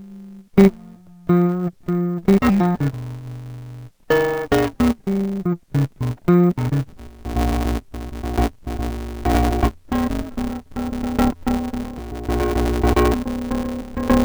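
From the start the music has interleaved audio read as planar. Each short block, about 5.8 ms and fitting a 256-sample buffer, gets its left-right pairs split into halves, so everything sounds dull and robotic with a buzz near 172 Hz and no clear octave drop.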